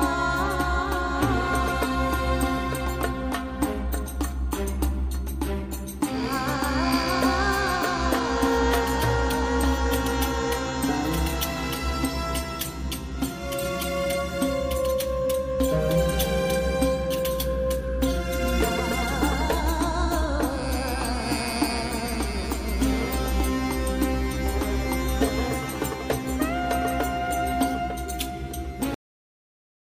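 At 28.94 s a cut-off end: the final buffers never played, so sound stops mid-event. The waveform drops abruptly to flat digital silence, with a hard vertical edge on the spectrogram.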